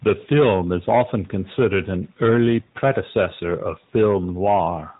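From start to finish, the speech carries the sound of an AMR narrowband mobile codec. The audio was squeezed through a telephone-grade coder that models the vocal tract and rebuilds it from a few pulses per short frame. Nothing above about 3.8 kHz survives, so sibilants lose their edge and the voice sounds boxed in. The damage is plainly audible, a buzzy, synthetic texture, which fits a mid-rate mode around 10 kbps.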